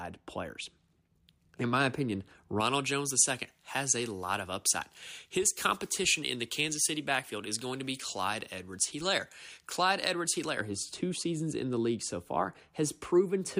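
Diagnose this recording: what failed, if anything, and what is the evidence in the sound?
Pre-emphasis left on, 2.6 to 10.6 s. Speech turns thin, bright and sibilant. 10 kHz sits about 11 dB hot, fitting an unremoved J.17 transmission boost.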